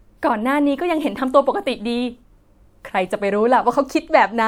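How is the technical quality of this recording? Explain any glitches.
No glitches turn up anywhere in this speech recording. There is nothing here that calls for an explanation.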